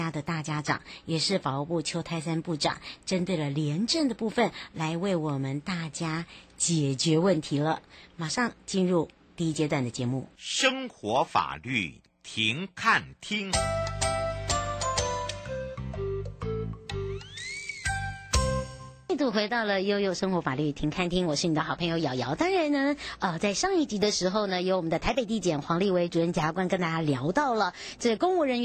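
No technical faults can be heard anywhere in this recording. The sound runs continuously with nothing that stands out as a defect.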